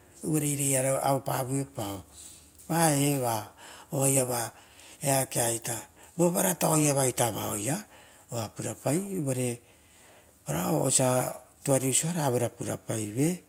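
No technical faults are audible.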